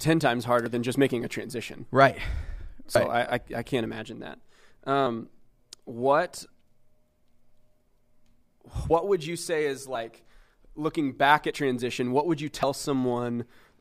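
Seven brief jumps interrupt the speech, at 0.66, 2.94, 5.06, 8.90 (just before "would you say is"), 9.94 (just after "would you say is"), 11.50 and 12.63 s (after "transition what would you"). At each, the audio jumps forward by a few tens of milliseconds, close to a tenth of a second at 2.94 s. These are compressed frames skipped: whole frames went missing or were rejected by the decoder.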